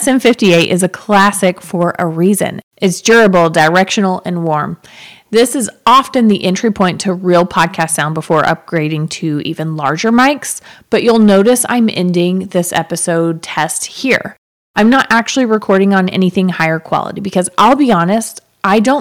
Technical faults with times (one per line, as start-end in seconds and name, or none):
0.00-19.01 hard clipping